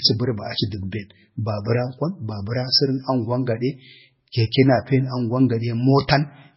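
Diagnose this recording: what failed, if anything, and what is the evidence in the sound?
The codec stage failed: the speech shows heavy MP3 compression damage for the whole clip. Nothing is present above 5.6 kHz, so the treble is cut off flat, and the remaining band sounds watery and swirly as weak frequency lines drop in and out from frame to frame. Sibilants turn metallic and attacks smear. Damage this severe points to a very low bitrate around 16 kbps, which is the likely cause of the encoder discarding so much.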